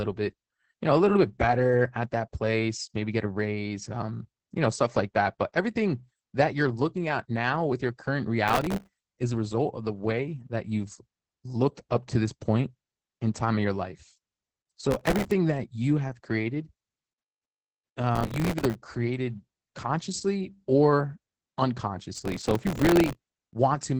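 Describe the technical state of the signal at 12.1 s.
At 12.1 s the speech carries Opus voice compression, present for the whole clip rather than as a local event. The codec is running its SILK linear-prediction mode in wideband, so nothing above 8 kHz survives, and the excitation is coded coarsely enough to sound like a rate around 10 kbps. The damage is heavy: the voice comes across muffled and hoarse, with a slightly robotic, buzzy quality where fine detail in the excitation has been discarded.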